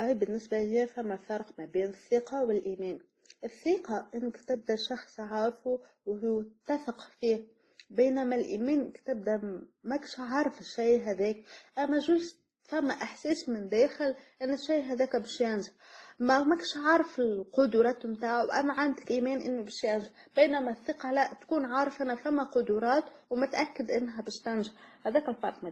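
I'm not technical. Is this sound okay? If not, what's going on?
No. The speech was likely compressed twice by different formats, called transcoding between lossy codecs, so two layers of blurry, swirly blemishes stack up from start to finish.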